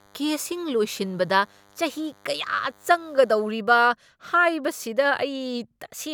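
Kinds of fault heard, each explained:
DECT cordless phone buzz: a steady, thin buzz rich in harmonics sits under the speech from the start until about 3.51 s, well below the talker. A nearby DECT handset or base fires a radio burst every 10 ms, and the audio circuitry rectifies it into a 100 Hz buzz.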